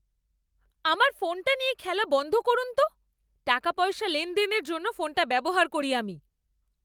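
Nothing here trips the ear at all: no dropouts, glitches or other technical faults turn up anywhere in this speech recording.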